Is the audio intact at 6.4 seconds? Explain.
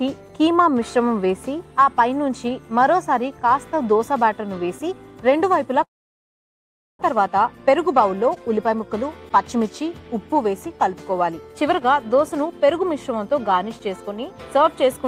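No. 6.4 seconds falls inside a long network dropout from 5.83 to 7.03 s. The last sound smears into a brief fading buzz, then silence holds. About 1 s of audio likely never arrived, and playback resumes slightly later than before.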